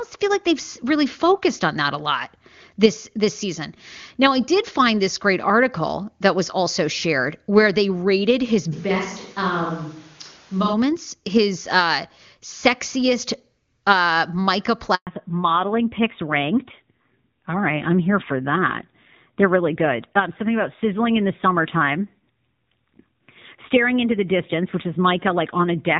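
From 8.74 to 10.72 s the sound turns hollow and roomy, about 5 dB quieter, with thinner bass and a noise floor roughly 25 dB below the speech. This is likely a switch to a distant microphone, and on a spectrogram the low end thins while a smeared reverberant tail fills the gaps. At 14.95 s a handover gap cuts the audio for 120 ms, showing as a flat line in the waveform and an empty vertical strip in the spectrogram. From 15.07 s to the end, a fallback to narrowband removes everything above 4 kHz, so the sound turns duller and rougher than the clear wideband stretch before it. The spectrogram shows a hard ceiling at 4 kHz, which fits a switch to a narrowband codec such as AMR-NB.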